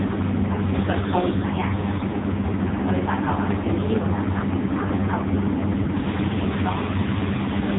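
Throughout, the speech carries heavy AMR narrowband mobile codec damage. A low-bitrate pulse-excited vocal-tract model, likely near 5.15 kbps, makes it buzzy and synthetic. The spectrogram shows nothing above 3.8 kHz.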